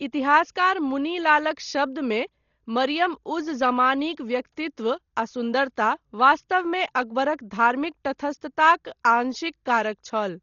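From start to finish the speech sounds dull and boxed-in, with nothing at all above about 6.9 kHz, and there's a rough, fluttery grain hanging around the voiced sounds. That's heavy codec damage, most likely Dolby Digital compression pushed down to something like 32 kbps. At that rate the encoder trims the band and leaves lots of frequency lines without real data, so the decoder fills those gaps with noise, and that's the flutter you hear.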